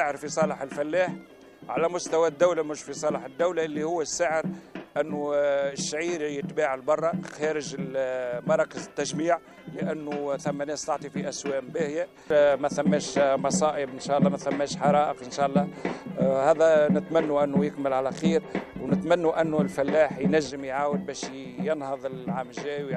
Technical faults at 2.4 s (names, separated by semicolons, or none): none